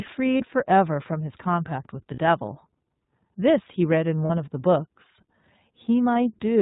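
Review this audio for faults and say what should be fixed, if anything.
The speech is coded with the iLBC codec throughout. Nothing above 4 kHz survives, and the sound is plainly rough and synthetic. The character fits iLBC's 15.2 kbps mode with 20 ms frames. To prevent this, carry the call on a wideband codec instead.

There are lost iLBC frames at 0.38–0.42 s, 2.14–2.19 s, 4.26–4.31 s and 6.14–6.16 s. The first and last gaps are 20 ms long, and the middle two are 40 ms. In each, the decoder repeats the last pitch cycle with added noise, which gives a brief buzzy, held vowel. The voice is right again almost at once. To prevent this, reduce packet loss on the network path or add redundancy or forward error correction.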